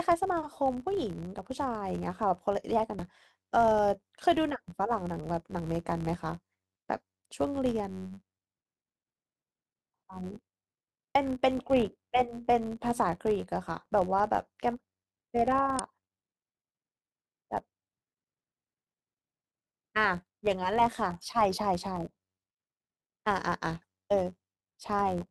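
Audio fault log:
throughout: filter restarted on every block. The filter starts each block from silence, so a tick repeats at about 93.8 Hz, which fits a 512-sample block. The buzz follows the speech level, unlike steady hum.
2.99 s, 11.15 s, 15.79 s: damaged data in a compressed stream. The decoder misreads corrupted frames and resyncs, giving brief blips.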